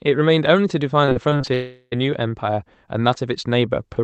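From 1.05 to 1.49 s the speech turns choppy and robotic. This is repeated packet loss. Seven short holes fall in under half a second, the longest about 24 ms. Each one is patched by stretching the sound just before it. Roughly a third of the stretch is made up this way, about 141 ms in all. The repeated patching leaves the sound choppy with pieces missing.

At 1.53 s the audio stops arriving for about 0.4 s, until 1.94 s. This is a long network dropout, as the likely cause. The receiver carries the last sound forward as a fading buzz for most of the gap, about 381 ms. A short silence of about 30 ms follows. Speech then resumes, and the missing part never returns. The dull top end, cut near 8 kHz, fits an Opus call path.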